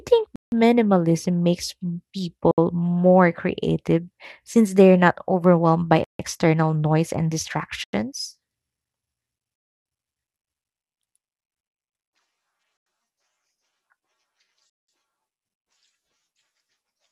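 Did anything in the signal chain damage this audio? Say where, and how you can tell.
Yes, in the wireless playback stage. The speech drops to dead silence at 0.36, 2.51, 6.04, 7.84, 9.56, 12.77 and 14.70 s for 70 to 300 ms, then resumes. That's likely a Bluetooth stall, where the headphone buffer runs dry waiting for resent packets.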